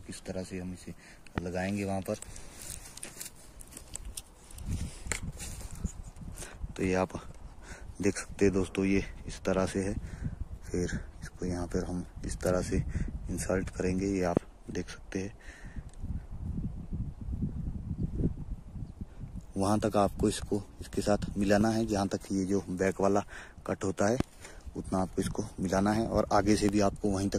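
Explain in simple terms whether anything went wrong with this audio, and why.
There's a loud pop at 1.38–1.40, 14.37–14.39, 21.61–21.63, 24.20–24.23 and 26.69–26.71 s, each a short sharp thump over the sound, which keeps going underneath. It's likely a voltage glitch from a switch, plug or static.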